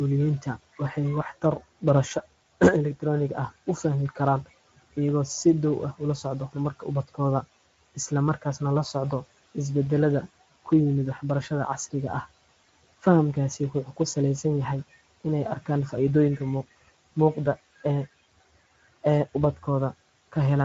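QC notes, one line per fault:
Throughout, Speex codec: the speech sounds hoarse and grainy, with a buzzy edge and a hissy, noise-like top end. A CELP coder this short of bits cannot model the excitation faithfully, which fits a Speex mode near 16.8 kbps.
0.41–2.26 s, 3.83–8.95 s, 10.65–12.26 s, 12.99–14.16 s, 15.21–17.85 s, 19.03–20.35 s, speech cut by the noise suppressor: consonants and word endings sound swallowed, dipping by about 11 to 17 dB. In the first two spans, just before and after "elektaroonigga ah u", the cuts add up to roughly a third and half a second. In the others they add up to a fraction of a second. The suppressor took this speech for the room noise, which sits about 23 dB below it, and turned it down.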